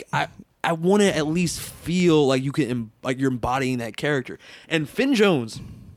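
Speech, with a regular tick running through it: a click every 0.79 s or so, from about 0.44 s through to about 5.9 s, so around seven of them. That steady spacing is the giveaway for clock drift buffer slips. Most likely two devices are running on separate clocks a couple of hundred ppm apart, so the buffer between them creeps until a handful of samples gets dropped or repeated, and each of those jumps lands as a click.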